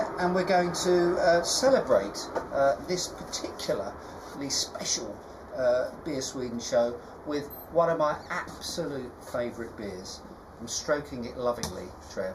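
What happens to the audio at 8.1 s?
At 8.1 s, as throughout, channel delay (comb filtering) is present. One channel lags by a fraction of a millisecond, and the mono sum cancels evenly spaced frequencies from about 3 kHz, sounding hollow. A spectrogram shows steady horizontal notch bands.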